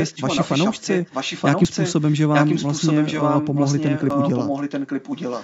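Echo leak runs through the whole of this speech clip: a second copy of the talking trails the original by about 930 ms, only slightly quieter than the direct sound, most likely because a far-end loudspeaker's sound reached its microphone and the echo canceller let much of it back into the call. Audio missing between chunks is heard at 1.65 s and 4.10 s as abrupt skips, each dropping a few tens of milliseconds with the two sides butted together. Their spacing fits a likely 2.5-second processing chunk losing a sliver at each handover.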